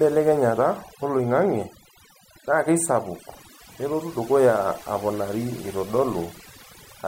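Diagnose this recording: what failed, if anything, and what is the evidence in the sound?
Overdone noise removal in the processing stage, throughout: gated near-silent background with twinkling specks. A spectrogram shows patchy, isolated time-frequency blobs amid blank gaps.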